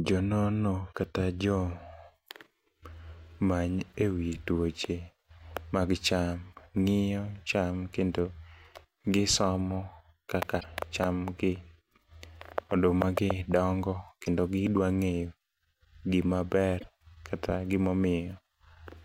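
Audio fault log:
10.59–10.64 s, 14.25–14.28 s, 16.79–16.84 s: broken MP3 bit reservoir. Each brief chirp, noise burst or short hole, about one to two 26.1 ms frames long, is likely a decoder finding bytes of another frame where the data it borrowed from cut frames should be. On the waveform it shows a jump.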